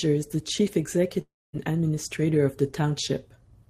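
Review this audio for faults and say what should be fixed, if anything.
Long network dropout, 1.21 to 1.55 s, after "is the chief": likely packet loss; a fading buzz turns to silence, then "administrator of the" resumes with 0.32 s lost.

Prevent it with a more stable network path plus forward error correction or retransmission, so lost audio is recovered before playback.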